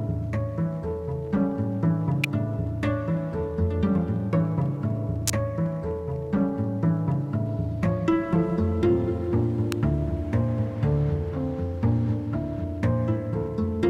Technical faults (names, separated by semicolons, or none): electrical switching spike